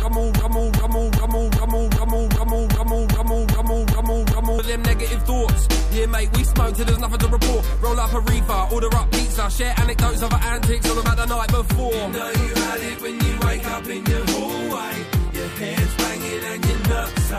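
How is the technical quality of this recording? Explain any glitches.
One fault stands out, at the very start. A broken-record loop runs from 0.00 to 4.59 s and is already under way when the clip begins. A 0.39 s fragment repeats exactly, back to back, 11 times. The likely cause is a stalled player, encoder or stream resending its last fragment, so the audio due then is lost.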